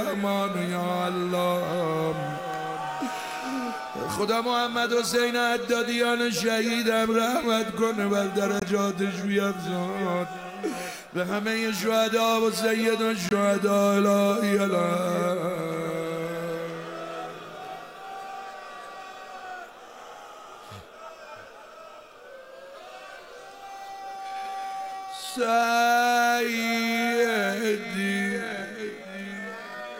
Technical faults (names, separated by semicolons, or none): corrupt frame muted; time-stretched section